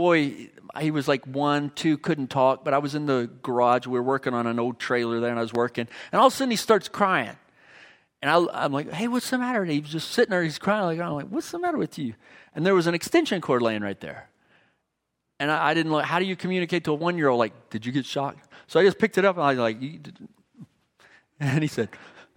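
Throughout the speech, the sample rate was raised by linear interpolation, joining neighbouring samples with straight lines, which fits a conversion from 24 kHz to 48 kHz. This imaging from linear upsampling leaves the top of the original band softened, while a faint mirrored copy of the spectrum sits between 12 kHz and 24 kHz, roughly 35 dB below the speech. It comes through as a light metallic shimmer riding on sibilants.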